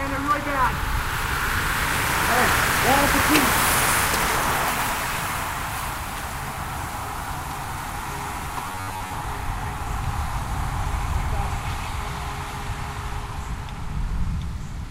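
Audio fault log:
8.68 to 9.16 s, robotic sound from repeated short buffers: for about half a second the sound collapses into a rigid, metallic buzz pitched at 93.8 Hz that only loosely tracks the original. That fixed tone matches a repeat period of roughly 10.7 ms, which points to fresh audio arriving too slowly and the playback likely looping the last short buffer to fill the gap, so most of this stretch is repetition while the real material is skipped.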